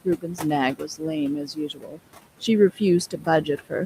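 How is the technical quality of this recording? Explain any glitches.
The recording is marred by heavy noise suppression, which pulls the room noise, sitting about 15 dB below the speech, down by about 18 dB.

Noise suppressor artifacts run throughout. Bands judged as steady noise are cut frame by frame, so the background pumps between and under phrases.

Speech cut by the noise suppressor occurs at 0.04–0.44 s, 0.75–1.04 s, 1.43–2.0 s and 3.11–3.27 s. Quiet speech was classed as noise and dropped by up to about 18 dB, leaving parts of each span swallowed and faint.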